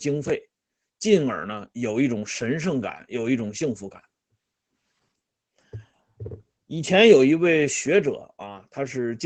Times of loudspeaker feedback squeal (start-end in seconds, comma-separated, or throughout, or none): none